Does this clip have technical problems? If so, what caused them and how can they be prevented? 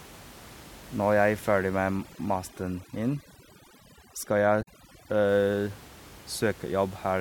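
Yes. From 1.49 to 5.29 s there is overdone noise removal. The room noise, sitting about 22 dB below the speech, was attacked by a reduction setting that was far too strong, so individual frequency bands near the noise estimate were pulled down or switched off. Quieter parts of the speech vanished with them, leaving the voice over near silence with twinkling specks. On a spectrogram this shows as a patchy, holed background with isolated bright dots scattered between the speech harmonics. Prevention: use gentler reduction depth, or leave a little room noise in place.

From 4.59 to 4.68 s there is damaged data in a compressed stream. Corrupted bytes made the decoder misread the frames in that stretch and lose sync until it found the next valid frame header, producing a brief glitch. In the waveform this appears as a brief break that doesn't match its surroundings, and on a spectrogram as a smeared or blocky vertical smudge that breaks the speech pattern for under a tenth of a second. 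Prevention: carry the stream over a transport with error checking and keep metadata out of the audio frames.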